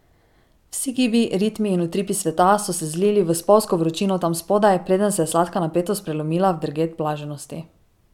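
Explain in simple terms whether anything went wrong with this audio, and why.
Nothing went wrong with this speech recording. Listening through it, no problem turns up at any point, so there is nothing to explain.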